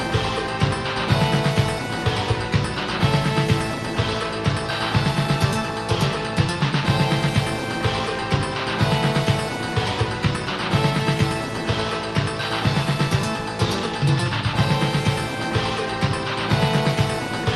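Nothing stood out on listening, with the audio carried through the call path at a bandwidth that tops out around 12 kHz.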